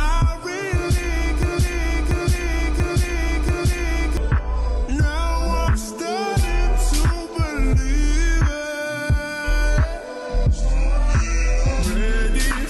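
Broken-record loop, 1.43 to 4.17 s: one 0.69 s fragment repeats four times back to back, likely a stalled stream resending its last chunk, so that span's audio is lost.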